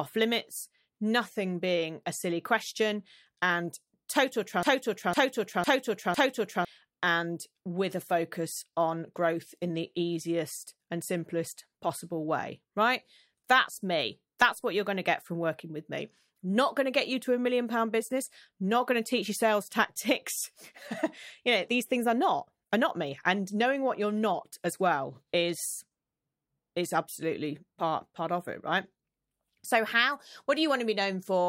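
A broken-record loop runs from 4.63 to 6.65 s in this speech clip: a 0.50 s fragment repeats exactly four times back to back. The likely cause is a stalled player or stream resending its last buffered piece, so the speech due in those two seconds is lost.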